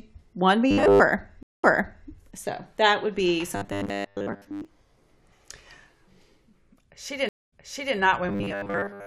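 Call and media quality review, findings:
Robotic sound from repeated short buffers, 0.71–1.01 s: rigid metallic buzz at 100 Hz, which fits a 10 ms chunk being looped. Most of the real speech is skipped. Likely cause is jitter buffer underrun, with the playout repeating the last buffer while waiting for data.

Same robotic buzz, 3.56–4.65 s: 100 Hz, with most of the audio replaced by repeats. Likely the same starved playout path.

Same again, 8.29–9.06 s, running to the end: 100 Hz buzz, most content lost to repeats. Likely the same underrun repeating the last buffer.

Stream reconnect, 1.43–2.09 s: about 195 ms of silence, then playback resumes about 464 ms earlier than where it cut off. The connection dropped, a fresh decoder started mid-stream, and the server resent a burst, so that stretch is heard again.

Stream reconnect, 7.29–7.96 s: about 234 ms of silence, then resumes about 441 ms earlier. 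Same mechanism: transport drop, decoder restart and a server resend that replays recent audio.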